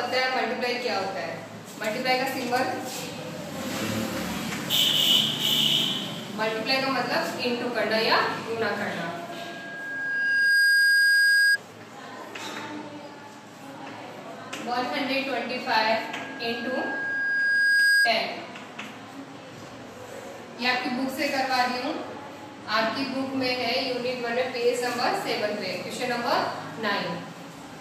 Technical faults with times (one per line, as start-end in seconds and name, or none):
9.29-11.58 loudspeaker feedback squeal
15.89-18.17 loudspeaker feedback squeal